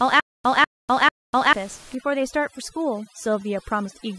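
From the very start until 1.53 s the speech is caught in a stutter with silent gaps: a 0.20 s fragment repeats every 0.44 s, separated by 0.25 s of dead digital silence, most likely a stalled stream retrying. The true silence separates it from a seamless loop. From 1.95 s to the end, overdone noise removal strips the room noise, which sat about 23 dB below the speech, down to twinkling specks. This differs from a codec artefact because the damage follows the noise floor.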